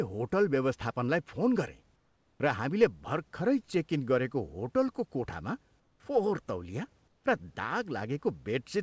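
During pauses the sender most likely stopped transmitting and the receiver filled the gaps with synthetic noise, giving comfort noise in place of the background at 1.96–2.40 s, at 5.80–6.00 s between "इन गरेको होटलको कोठामा" and "फोहोर तौलिया र", and at 7.08–7.24 s after "होटलको कोठामा फोहोर तौलिया". The real room noise, about 42 dB below the loud parts, turns flat and featureless and drops by about 3, 3 and 5 dB.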